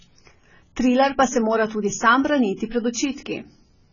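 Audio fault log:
Throughout, AAC compression: the speech sounds dull and smeared, with nothing above 7 kHz and a warbling, fizzy edge on sibilants. The likely cause is heavy AAC-LC coding at a rate that fits 16 kbps, which cuts the top band and coarsely quantises the rest.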